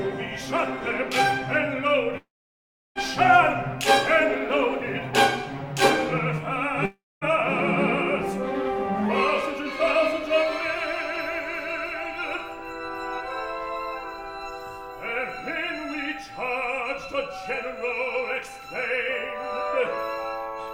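At 2.17 s the sound breaks off into a brief fading buzz, then near-silence for about 0.69 s before resuming at 2.98 s. The same happens at 6.85 s, with about 0.24 s of silence before audio returns at 7.24 s. Both are likely a long network dropout: packets stopped arriving, the receiver stretched the last sound briefly, then went quiet. About 0.78 s and 0.36 s of audio are missing.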